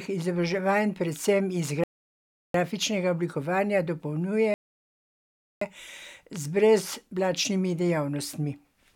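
At 1.84–2.55 s and 4.54–5.62 s, rebuffering stalls freeze the speech into flat, blank silence on the waveform and spectrogram, then resume exactly where it stopped, adding about 0.71 s and 1.07 s.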